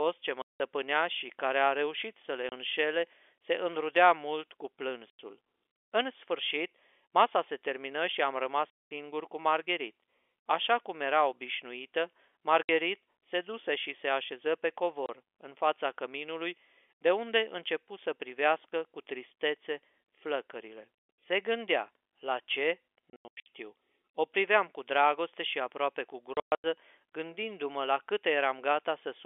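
Packet loss filled with silence cuts holes at 0.42 s (before "și care a reușit"), 2.49, 5.1, 8.7, 12.63 (after "cum era obișnuită"), 15.06, 23.1 and 26.34 s (after "dragoste și aproape cu"). Missing packets are replaced by dead silence, giving hard-edged gaps of 30 to 210 ms that fit 30 ms packets. The last two are scattered bursts over 360 and 300 ms, all on narrowband telephone-coded audio.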